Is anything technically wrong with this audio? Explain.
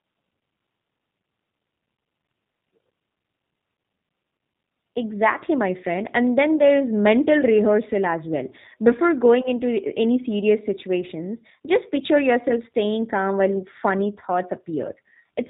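Yes. Throughout, the speech sounds band-limited, slightly rough and synthetic, with a plainly audible buzzy, artificial edge. That points to the G.729 codec, likely the G.729A variant at 8 kbit/s. It rebuilds each 10 ms frame from a vocal-tract filter, a pitch predictor and a few pulses, and discards everything above 4 kHz.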